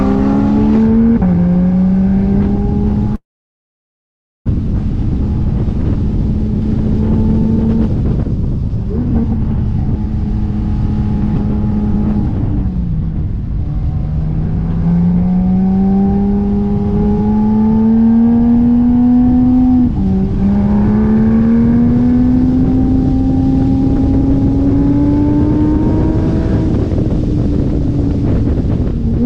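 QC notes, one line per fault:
3.15–4.50 s, long network dropout: The audio likely stopped arriving for over a second. The receiver stretches the last sound into a brief fading buzz, and then about 1.2 s of near-silence follows. When the sound returns, roughly a full second of material is simply gone, so it resumes further along rather than where it broke off. The receiver's delay also shifts by around a third of a second.
5.30–6.62 s and 12.93–14.94 s, jitter buffer speed-up: The receive buffer held more audio than its target. To shed that backlog, the receiver repeatedly cut out tiny pitch-period-sized slices. The first stretch plays at 112% speed and drops around 150 ms. The later one runs at 104% and trims about 100 ms. Pitch stays put, but the first, faster stretch sounds hurried.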